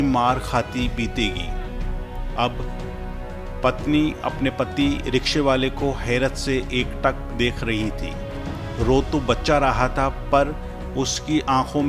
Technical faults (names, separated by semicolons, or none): none